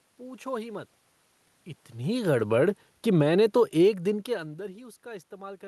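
From 1.96 s to 4.59 s, the automatic gain is falling. The gain control judged the input too loud or its background noise too strong and reduced its gain by about 7 dB. It did this slowly, not in one step. The level sinks across those 2.6 seconds, and the room noise sinks with it. That shared drop separates it from the talker's own movements, near 1.5 s and 4 s, which change only the voice. The call path's band limit near 12 kHz stays unchanged throughout.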